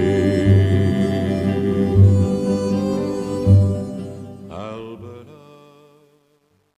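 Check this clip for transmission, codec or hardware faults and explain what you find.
One fault is present: truncation distortion on a fade. From 3.46 s to the end at 6.77 s, the fade-out loses resolution. The fade stage keeps too few bits and adds no dither, which fits about 11 bits. The quiet tail steps into coarse squares. It turns gritty, worst from 4.99 s to the end.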